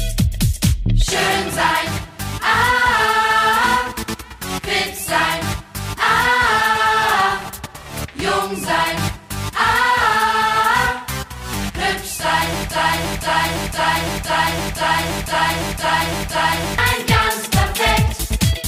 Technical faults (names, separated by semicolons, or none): broken-record loop